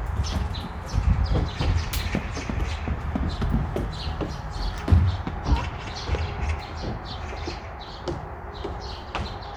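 No technical faults can be heard anywhere in this recording of sounds. Nothing in the audio calls for a timestamp or a description of a fault.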